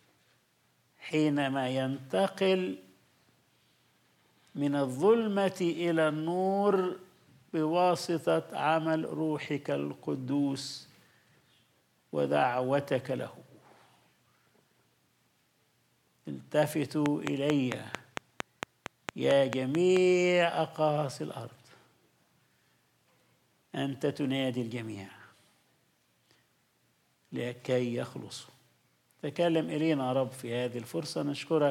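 From 17.06 s to 19.98 s the audio carries a train of clicks: about fifteen similar pulses at a regular 4.5 per second, peaking roughly 20 dB above the signal, likely from electrical interference.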